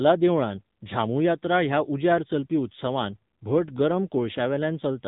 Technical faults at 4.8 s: AMR narrowband mobile codec

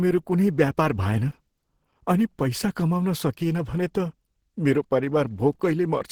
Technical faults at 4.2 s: Opus compression

